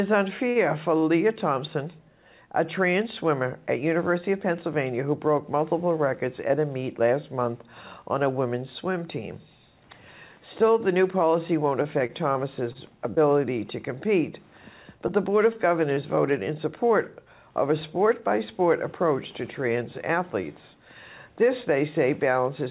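At 0.5 s a short stall from a late packet appears. The jitter buffer ran dry, so the receiver stretched the last sound for 54 ms until the packet arrived. Nothing is lost, but the sound hangs with a slight buzz or dip. On a spectrogram the harmonics run flat and smeared for a moment. The waveform shows repeated, near-identical cycles, and everything after it sits 54 ms later.

Scattered short gaps follow from 11.82 to 13.18 s and again from 15.08 to 15.99 s. There are roughly five holes in the first stretch and three in the second, none longer than about 20 ms. Each was patched by continuing the previous sound, so they come across as brief ticks and smears. On a spectrogram they show as thin vertical seams or blurred slivers. In the waveform, small repeated segments replace what was missing.

From 17.26 to 20.23 s a jitter buffer speed-up plays the audio at 102% to shed built-up delay. It removes roughly 70 ms in total by cutting out individual pitch periods. 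The pitch stays the same. Spectrogram pitch lines keep their height while events arrive slightly early. The waveform loses occasional cycles without visible breaks.

Throughout, nothing appears above 4 kHz, which fits a G.711 A-law call codec at 64 kbps.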